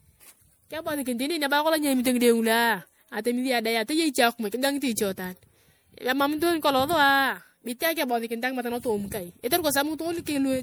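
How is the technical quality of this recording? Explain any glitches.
The recording is marred by a single fault that runs through the whole speech clip. Generation loss is present from start to finish. The likely cause is repeated MP3 decoding and re-encoding, around four passes, at a rate consistent with 96 kbit/s. Each pass quantises the signal again on a shifted frame grid, so the noise and spectral gaps pile up. The result sounds swirly, hollow and smeared, with consonant attacks blurred, and nothing remains above 20.8 kHz.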